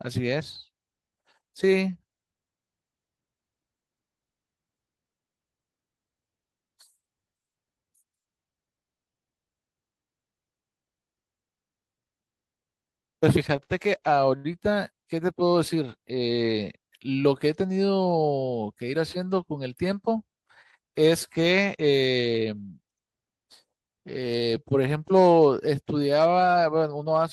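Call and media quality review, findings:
Short stall from a late packet, 13.64–13.72 s and 14.36–14.46 s. Jitter buffer ran empty, receiver held the last sound for 59 ms and then 80 ms until the packet arrived. Nothing lost, delay grows by the same amount. Held sound, slight buzz or dip.

Jitter buffer speed-up, 17.08–17.65 s. Buffer over its target, receiver repeatedly cut pitch-period-sized pieces, around 50 ms in total, so playback runs at 108% with pitch unchanged. Speech sounds briefly hurried.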